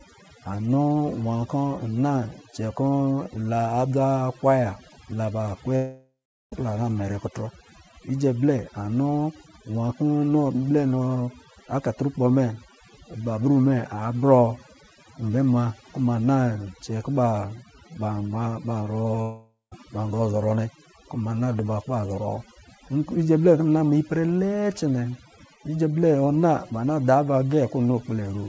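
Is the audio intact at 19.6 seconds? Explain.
No. At 19.6 s the audio sits inside a long network dropout running from 19.22 to 19.73 s, about half a second in which no audio arrived. The sound just before the gap is stretched into a buzzy hiss that fades. Near the end of the gap there is about 150 ms of near silence, and then the sound resumes further on with the lost half-second simply missing. The likely cause is a stall in the network stream. A short concealment glitch would smear only a few tens of milliseconds, whereas this drawn-out fade into silence marks a longer outage.

The moment is also affected by overdone noise removal, which runs through the whole clip. The suppressor drives bands near its noise estimate almost to zero, so the background around 19.6 s is near silence flecked with twinkling specks. This differs from the dropout because it is continuous and never cuts the sound off.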